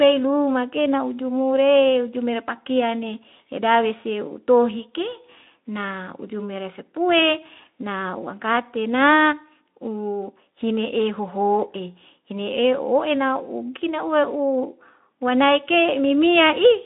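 No technical faults are audible.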